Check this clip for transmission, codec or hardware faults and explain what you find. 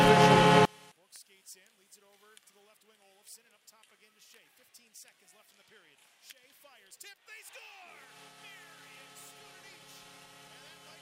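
One fault is present. One channel inverted: from 0.65 s to the end, the sound drops by about 31 dB and stays there. The likely cause is a stereo source with one channel's polarity reversed before the mix to mono, so everything the two channels shared cancelled, background included. What remains is only the small difference between the channels, heard as a much quieter residue rather than the full sound that plays before 0.65 s.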